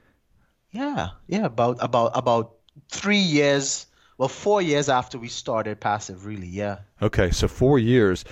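No technical faults are audible.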